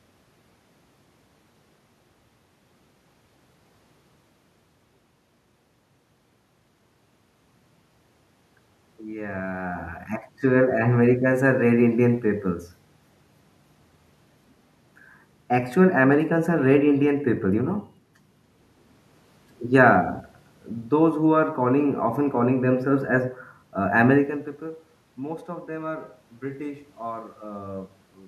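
No technical faults are audible.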